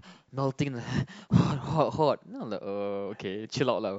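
At 0.95 to 0.98 s, compressed frames are skipped. About one frame, roughly 50 ms of speech, vanishes. The speech jumps ahead at the join.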